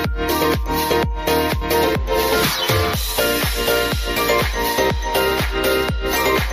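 At about 1.61 to 1.64 s there's a quick jump where compressed frames got skipped. With 20 ms frames, roughly three went missing, so the audio jumps ahead by something like 70 ms.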